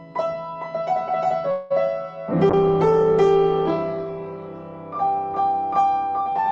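A call audio freeze runs from 1.51 to 1.74 s, likely caused by packets stalling so the jitter buffer ran dry. The receiver stretched the last sound into a fading buzz for about 0.19 s. Nothing is lost; the audio simply resumes later.

A call bitrate drop follows from 2.50 to 4.93 s, when the bandwidth estimate fell and the encoder went from 48 to 16 kbps for about 2.4 s. Coarser coding makes the sound rough and watery, with the highs dulled.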